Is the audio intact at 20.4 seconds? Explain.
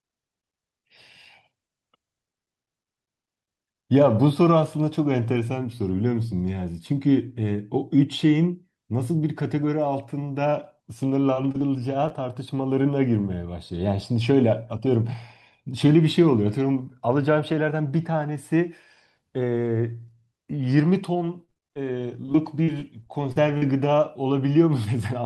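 Yes, the speech at 20.4 seconds is intact, with nothing at that moment beyond the ordinary band-limited sound of the call codec it passed through.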